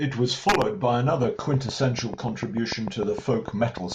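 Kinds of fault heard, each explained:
Train of clicks: Right after "was followed", at about 0.94 s, a steady ticking starts and keeps going to about 3.93 s, roughly twenty clicks at an even 6.7 per second, all much the same shape. They jump out around 10 dB above the speech and carry straight through the gaps too. That regular, repeated pulse most likely comes from interference from nearby gear or a faulty connection or power supply.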